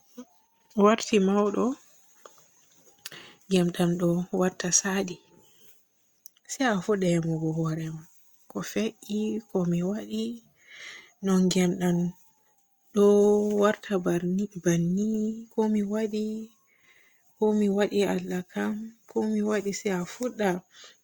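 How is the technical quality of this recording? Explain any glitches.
Nothing here needs explaining, since I can't hear a single technical glitch anywhere in the recording.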